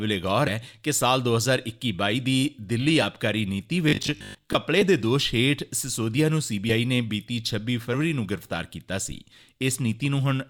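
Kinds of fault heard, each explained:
Robotic sound from repeated short buffers: From 3.89 to 4.55 s the sound turns into a stiff, metallic buzz pinned at 50 Hz. It still loosely tracks the original contour. The likely cause is audio arriving too slowly, so the player keeps looping the most recent 20 ms slice to fill the gap. That 20 ms period sets the fixed 50 Hz pitch, and about half of this stretch appears to be repeats while the real material is dropped.
Compressed frames skipped: Between 7.93 and 7.95 s the sound jumps forward slightly. Roughly 40 ms of audio goes missing, which fits two lost 20 ms frames that were either absent from the stream or rejected by the decoder as corrupt.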